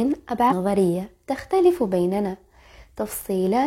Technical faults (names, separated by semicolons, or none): damaged data in a compressed stream